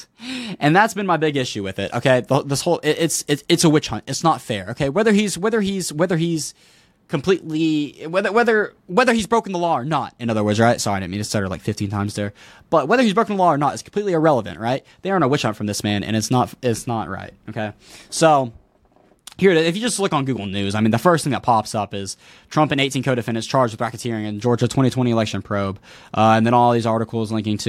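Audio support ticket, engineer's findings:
Listened to the full speech recording and found nothing to flag, so no faults to log here.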